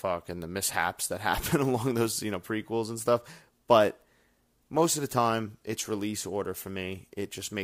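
No technical faults can be heard anywhere in this speech recording. There is nothing in the audio that needs a time marked against it.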